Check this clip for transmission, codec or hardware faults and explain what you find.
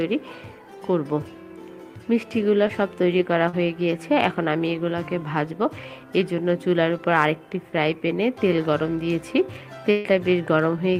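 Two kinds of packet-loss fault are present. Short concealed packet loss occurs at 2.67 to 2.71 s and 3.49 to 3.55 s. Audio arrived too late. The receiver extended the previous sound for about 15 ms and then 39 ms, blending back. Each heard as a brief smear.

A burst of packet loss occurs at 9.91 to 10.07 s. About 140 ms of consecutive audio was lost. The receiver continued the last sound for 138 ms, fading it down. This gives a held, dimming tail. The audio then resumes with that stretch missing.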